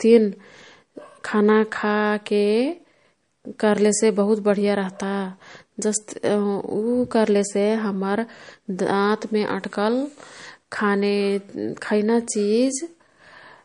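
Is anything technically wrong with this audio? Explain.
Yes. Throughout the speech there is a hard ceiling at about 10.6 kHz and a watery, swirling texture, most likely from MP3 compression at a low bitrate, consistent with roughly 40 kbps. Short of bits, the encoder drops all content above that line and discards quieter frequency bands, which flicker in and out between frames. The result is dulled s sounds with metallic chirps and softened attacks. A spectrogram shows a flat edge at 10.6 kHz with blank space above it and speckled, patchy holes below.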